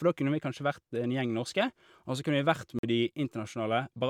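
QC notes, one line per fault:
2.79–2.83 s, block of digital silence: after "kunne vi vært", a 46 ms silent gap, fitting an unfilled 2048-sample buffer; hard edges cut in and out with no fade, showing as vertical spectrogram lines.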